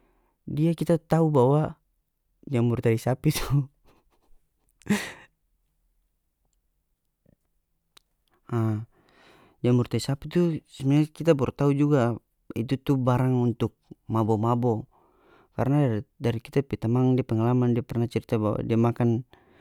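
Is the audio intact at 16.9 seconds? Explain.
Yes, the speech at 16.9 seconds plays through cleanly, with no dropout, click, distortion or other audible fault at that moment.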